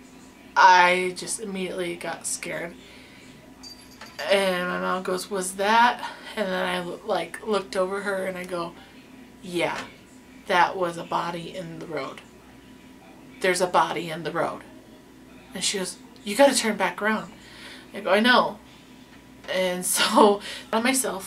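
No technical faults are audible.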